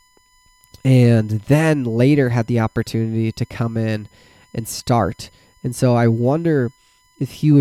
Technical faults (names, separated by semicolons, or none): USB whine